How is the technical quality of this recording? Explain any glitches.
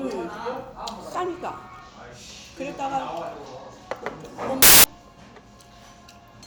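There's one glitch. From 4.62 to 4.84 s the samples are built from the wrong bytes. The reader assembles each value misaligned or byte-swapped, so the low bits dominate, giving a burst of loud, harsh broadband noise.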